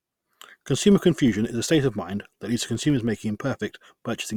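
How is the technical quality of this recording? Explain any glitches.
The recording has one persistent fault that runs for the whole clip: a filter restarted on every block. The processing filter drops its internal state at each block boundary and starts from silence, so every block opens with a small transient. These repeat at 46.9 Hz, which fits a 1024-sample block, and together they form a low, regular buzz under the speech. The buzz grows louder as the speech gets louder and fades in the quieter passages.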